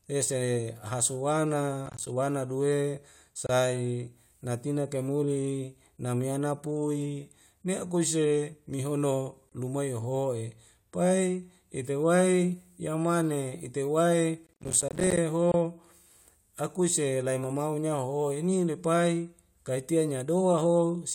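Processor overload crackle at 1.86–2.07 s and again at 14.47–15.17 s: missed deadlines, which fit roughly 10 ms buffers going out as silence, leave rapid hard-edged dropouts heard as gritty tearing over the speech.

Gap at a join of encoded pieces at 3.47 s (27 ms), 9.49 s (24 ms) and 15.52 s (24 ms), every 6 s: untrimmed encoder delay and padding open brief silences before the speech resumes.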